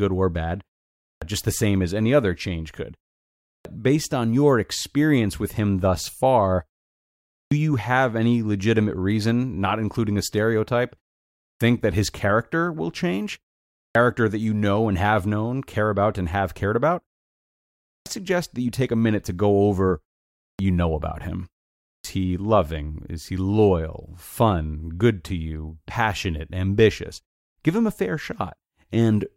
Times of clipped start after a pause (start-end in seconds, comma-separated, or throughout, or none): 1.04-1.22, 3.44-3.65, 7.32-7.51, 11.40-11.61, 13.75-13.95, 17.85-18.06, 20.38-20.59, 21.86-22.04